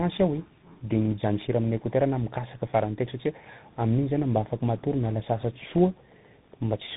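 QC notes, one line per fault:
throughout: tandem speech coding. The speech sounds rough, muffled and warbly, with nothing above 3.8 kHz. The character points to two speech coders in a row, consistent with GSM full rate at 13 kbit/s handing off through a G.711 A-law link into CVSD at 64 kbit/s. Each stage decodes and re-encodes the previous one's already degraded output, so the coding errors stack. The slope-tracking grit of CVSD is layered over GSM's smeared, buzzy texture.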